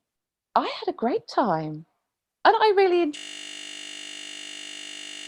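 At 3.17 s, just after "time and I really", the speech collapses into a steady buzz pitched at 50 Hz that continues to the end of the clip. This is a system hang loop. The computer or its audio driver stopped responding while the sound hardware went on replaying the same 20 ms stretch of its buffer, over a hundred times in a row. Because the looped slice is so short, the repeats fuse into a tone at the loop rate.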